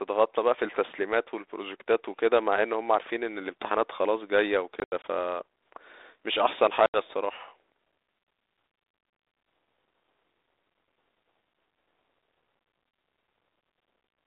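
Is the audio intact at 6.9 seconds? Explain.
No, there's packet loss on an ADPCM call from 6.86 to 6.97 s: about 80 ms, roughly four packets, drops out to hard-edged silence. The 32 kbit/s G.726 decoder's predictor and step size lose sync, so the speech comes back slightly distorted, settling within some tens of milliseconds.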